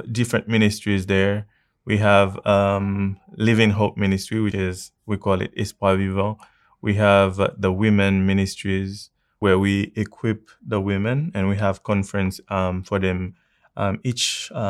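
Speech with audio missing between chunks: two skips, at 4.52 s just before "is we call it" and at 9.42 s between "uh the women ministries" and "we equip the women". Each is a butt-joined gap of about a tenth of a second, 4.9 s apart, likely lost at chunk boundaries in the recording or processing.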